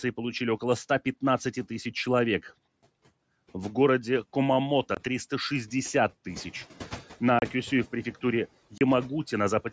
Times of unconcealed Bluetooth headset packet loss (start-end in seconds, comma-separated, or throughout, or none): 4.95-4.97, 7.39-7.42, 8.78-8.81